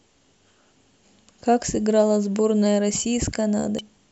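Damaged data in a compressed stream hits this speech at 1.02 s and again from 3.79 to 3.81 s. At each point part of the encoded stream is corrupt, so the decoder misreads those frames, loses sync, and has to hunt for the next valid frame header before normal decoding resumes. Each spot comes out as a brief chirp, squawk, click or short hole in the speech.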